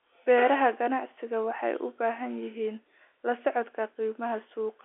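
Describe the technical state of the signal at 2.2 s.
At 2.2 s the audio is intact, with no fault to be heard; the narrow telephone band of the G.711 line coding passes the speech there as it should.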